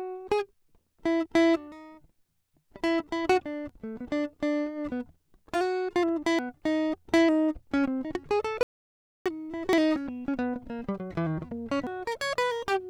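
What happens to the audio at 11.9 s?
At 11.87 s the music jumps forward. This is compressed frames skipped: a few whole frames of the encoded audio never play, because they are missing or the decoder rejected them as damaged. About three frames drop out, roughly 300 ms of music, which fits frames of about 93 ms each. The music resumes from a point further along than it should.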